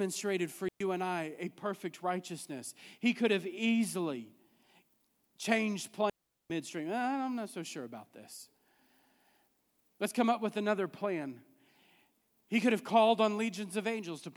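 Digital wireless dropouts hit this speech clip at 0.69 s, a 0.12 s hole just before "and I a perfect", and at 6.10 s for 0.40 s. Each time the receiver lost too much data and muted cleanly, leaving near silence with no noise burst.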